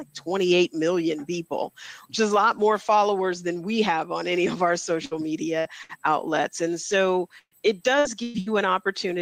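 Gain pumping runs through the whole clip. The gain is likely set far too high for the microphone, so a fast limiter or compressor keeps clamping down on every loud sound and letting go in between. The level swings by about 5 dB. Loud and quiet parts sit unnaturally close together, leaving the sound squashed and breathing.

A burst of packet loss occurs seven times, at 5.05 to 5.14 s, 5.59 to 5.68 s, 5.83 to 5.92 s, 7.39 to 7.54 s, 7.99 to 8.08 s, 8.23 to 8.37 s and 8.40 to 8.49 s. Each time, a run of audio failed to arrive in time, and the receiver stretched the last sound to cover the hole, fading it as it went. Most of these fills last about 60 ms and give a brief held buzz or fading hiss. The ones at 7.39 s and 8.23 s run about 120 ms. At 7.39 s the fill dies away into roughly 70 ms of silence. After each fill the sound jumps ahead with a piece missing.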